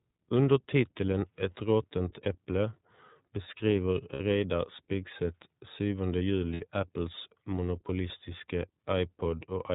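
The whole clip goes through the iLBC codec, so everything above 4 kHz is gone and the speech sounds a little rough and synthetic, with the damage plainly audible, which fits the 13.33 kbps mode. At 4.13 s and again at 6.54 s you get lost iLBC frames. Each 60 ms gap, which fits two 30 ms frames, is filled with a held, buzzy repeat of the last pitch cycle, then the voice snaps straight back.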